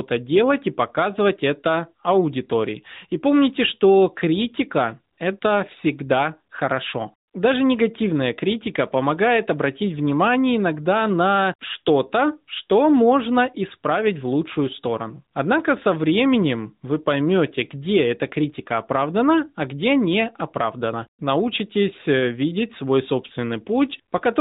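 Smooth, steady hiss briefly replaces the real background at 5.14 to 5.18 s after "помните что критика", at 5.40 to 5.42 s before "всегда хорошо", and at 7.28 to 7.34 s. This is AMR comfort noise: the sender judged these gaps silent, stopped sending speech frames, and the receiver synthesised filler noise.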